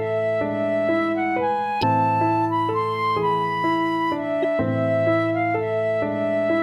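A short glitch cuts into the sound from 1.79 to 1.84 s and again, briefer, from 4.42 to 4.45 s. Both are damaged data in a compressed stream: corrupted bytes made the decoder misread frames and lose sync until it found a valid header.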